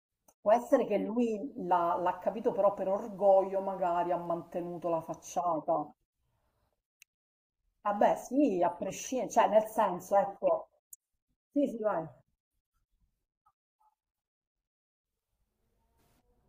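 No technical faults can be heard anywhere in the recording.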